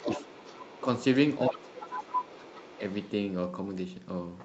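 Other side's voice leaking through, in a speech recording, appears from 0.0 to 0.81 s at about 10 dB under the talker, 1.8 to 2.38 s at about 5 dB, and 2.65 to 3.11 s, much fainter; this is likely loudspeaker echo the canceller failed to remove. Speech suppressed in double talk dips the talker by about 5 dB at 0.06 to 0.27 s and by about 15 dB across 1.49 to 2.8 s, likely because the canceller turned everything down while both sides overlapped. All of it sits within the call path's 8 kHz bandwidth.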